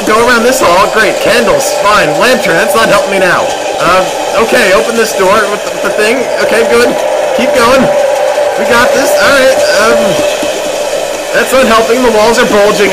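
At 1.04 s, 2.50 s and 3.75 s there is a small jump in the sound. There is no gap of silence. The audio simply skips ahead. Each skip loses only a few milliseconds, around 5 ms. The likely cause is a dropped buffer (overrun): the software failed to collect its samples in time, the hardware wrote over them, and the two sides were spliced directly together.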